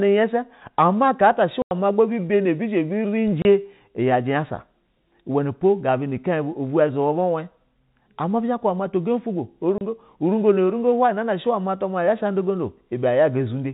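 At 1.62 to 1.71 s, 3.42 to 3.45 s and 9.78 to 9.81 s, packet loss filled with silence cuts the speech. Holes of 90 ms and 30 ms suggest 30 ms packets. Their edges are hard.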